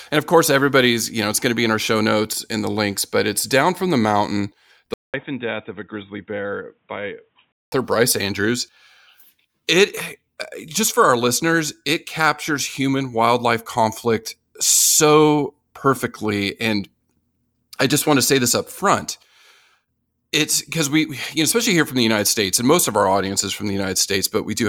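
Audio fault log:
4.94–7.72 s, input switched to a poorer device: after a 200 ms silence the speech turns dull and boxy, with nothing above 3.8 kHz, drops about 10 dB in level, and gains a faint background of its own; at 7.72 s the full sound returns. The likely cause is a change to a narrower-band microphone or headset call profile. Unlike a filter or codec bandwidth drop, the gap, level shift and changed noise floor reveal a different device.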